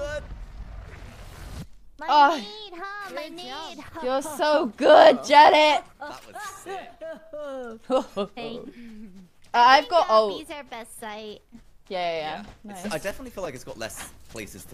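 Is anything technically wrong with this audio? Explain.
No, no technical faults found.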